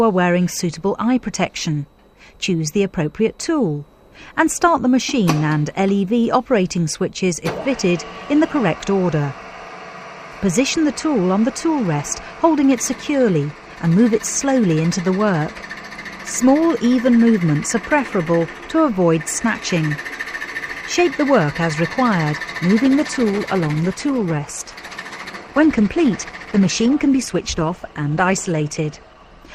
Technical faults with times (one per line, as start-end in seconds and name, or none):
22.82-29.54 adaptive stream at a lower bitrate